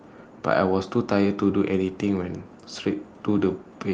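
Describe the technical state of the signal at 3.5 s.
Nothing is wrong at 3.5 s; the speech there comes through the call path intact, with no dropout, glitch or distortion at that moment.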